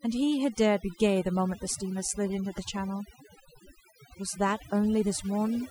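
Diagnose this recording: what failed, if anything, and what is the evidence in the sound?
The background drops to near silence flecked with twinkling specks throughout. This is overdone noise removal at the processing stage: the reducer was set too strong, so it pulls down narrow frequency bands near its noise estimate, taking quieter speech detail with them.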